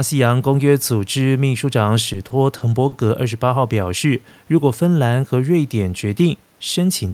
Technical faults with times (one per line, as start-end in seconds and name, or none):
2.13-2.94 repeated stalls (stutter)
4.07-4.45 jitter buffer slow-down